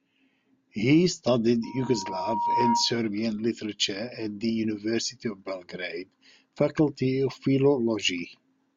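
From 1.63 to 3.01 s, a loudspeaker feedback squeal cuts into the speech. A single tone near 944 Hz swells over roughly a second until it sits a little above the speech. The microphone was picking up its own loudspeaker, and the loop ran away at that frequency.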